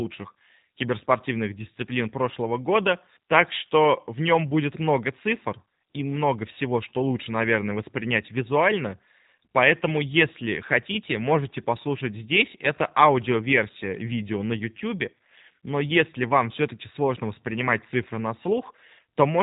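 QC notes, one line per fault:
throughout: G.729 codec. Nothing passes above 3.8 kHz, so the speech sounds narrow. Its roughness and synthetic edge are plainly audible. The speech is rebuilt from a vocal tract filter, a pitch predictor and a few pulses per frame, which fits an 8 kbit/s stream.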